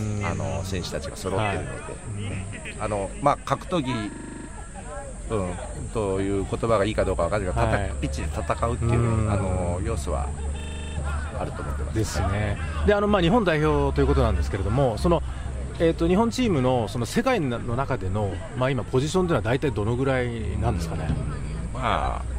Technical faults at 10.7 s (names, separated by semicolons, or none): system hang loop